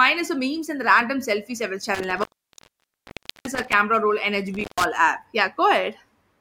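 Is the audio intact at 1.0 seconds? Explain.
Yes, at 1.0 seconds the speech is intact, with no fault of any kind audible at that moment.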